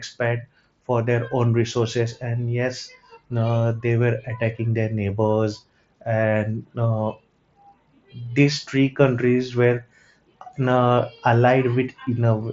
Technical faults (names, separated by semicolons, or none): none